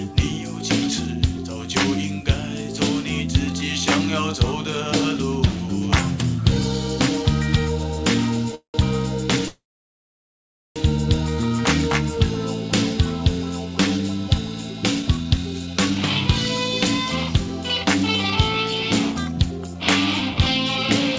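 Delayed packets likely emptied the jitter buffer, causing call audio freezes at 8.55–8.76 s and 9.48–10.78 s. A fading buzz or hiss gives way to silence, adding gaps of 0.19 s and 1.28 s. Jitter buffer speed-up then trimmed pitch periods to shed excess delay, hurrying the sound at unchanged pitch from 15.02 to 15.91 s (113%) and from 18.72 to 21.14 s (106%), each cutting about 150 ms.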